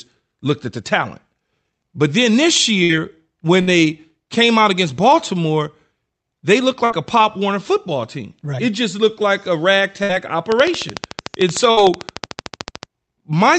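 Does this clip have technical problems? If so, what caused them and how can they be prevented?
Yes. A burst of packet loss hits at 2.83, 3.61, 6.85, 10.03 and 11.71 s. Examples come after "then this", "they looked" and "just looked like a". Each time, the last sound is stretched for about 55 ms and faded, then roughly 60 ms of speech is skipped. Prevent this with a steadier network connection and a deeper jitter buffer.

A train of clicks runs from 10.52 to 12.84 s. It is about 30 regular ticks at 13.4 per second, peaking about 15 dB above the speech. The likely cause is electrical interference or a faulty connection or power supply. Prevent it by shielding cables, moving away from noisy equipment and checking the connections and power supply.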